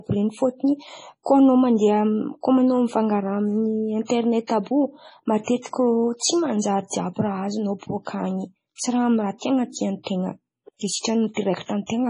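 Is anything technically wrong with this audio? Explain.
Yes. The speech carries heavy MP3 compression damage from start to finish. Nothing is present above 10.5 kHz, because the encoder has cut the treble at a fixed frequency to save bits. The damage is severe, which points to a very low bitrate, around 24 kbps. With so few bits, weak frequency lines are dropped and then return from frame to frame. That gives the voice a watery, swirling texture, blurs its attacks, and leaves the top end dull.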